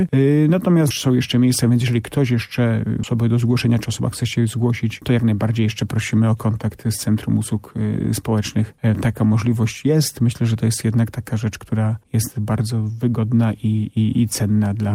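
At 3.03 to 3.05 s, a skip ahead drops roughly 0.7 s of audio, splicing both sides together abruptly. The waveform shows a hard seam with no gap and mismatched envelopes.

From 5.00 to 5.96 s, a jitter buffer speed-up trims pitch-period slices, about a tenth of a second overall, so the sound runs at 109% speed with unchanged pitch. Spectrogram harmonics stay level while events crowd closer.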